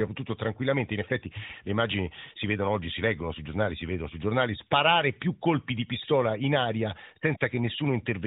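Nothing stood out on listening to this speech clip, which comes through the narrowband mobile codec with the band-limited sound that path gives.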